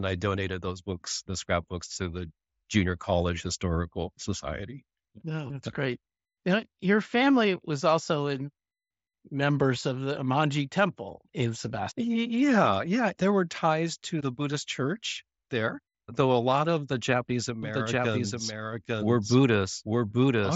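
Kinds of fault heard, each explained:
Doubled audio track: from 17.63 s to the end, a second full-band copy of the sound runs about a second behind at roughly equal level, entering abruptly with no decay or room colour; a slower second capture path or out-of-step edit is the likely cause.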